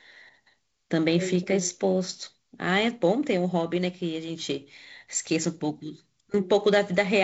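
Nothing here calls for attention: the speech arrives over G.722 wideband telephone coding at 48 kbit/s, with the top end stopping at about 7.7 kHz, and no faults turn up anywhere in it.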